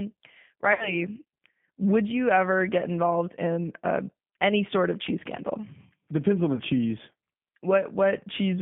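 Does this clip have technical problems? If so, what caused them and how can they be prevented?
Yes. The speech has passed through a G.729 codec for its whole length, and the damage is plainly audible. The line is confined to roughly 150 Hz to 3.5 kHz, so everything above that is gone, and the speech has the slightly rough, synthetic texture of a model-based coder. The decoder rebuilds each 10 ms frame from a vocal tract filter, a pitch predictor and a handful of pulses, which fits an 8 kbit/s G.729A stream. Prevention: negotiate a wideband codec such as G.722 or Opus on this call path instead of G.729.

There is also VoIP packet loss concealed by the speech codec, from 0.73 to 0.96 s and again from 6.55 to 6.62 s. The first gap is 60 ms of missing audio, which fits two lost packets, and the second is 30 ms, which fits one. In each case the decoder stretches its last pitch and filter into a buzzy tone or a coloured noise that fades. 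Because each frame depends on the previous one, the voice stays weak or distorted for some time after audio resumes, which is why the first disturbance runs to about 0.23 s. Prevention: reduce loss on the network path with QoS prioritisation and an adequately sized jitter buffer, or enable FEC or redundancy.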